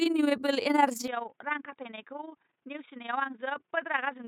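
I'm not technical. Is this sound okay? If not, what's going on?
No. From start to finish the speech has a fast, rough flutter, about twenty times a second. This is overlap-add ripple: the audio was chopped into long overlapping pieces and rejoined unevenly, so the loudness pulses with every piece rather than wobbling in pitch.

From 1.08 s to the end, the sound turns dull and boxy, loses its higher frequencies, and drops noticeably in loudness, with no gap at the change. That sudden, lasting shift most likely comes from the input switched to a poorer device, such as a headset microphone, rather than from gradual muffling or a volume fade.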